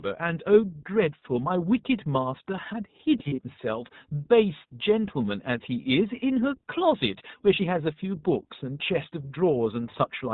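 Throughout, the speech carries the iLBC codec's narrowband sound. Nothing passes above 4 kHz, so a spectrogram shows a hard ceiling there. The plainly audible roughness and synthetic edge come from coding each short frame's excitation on its own, which fits a 20 ms frame at around 15 kbps.

From 3.18 to 3.40 s, lost iLBC frames break the speech into brief held, buzzy vowel fragments. The decoder fills each gap by repeating the last pitch cycle mixed with noise. The spectrogram shows smeared, repeated harmonic bands in short patches, the longest run about 40 ms, fitting roughly five dropped frames scattered across 200 ms.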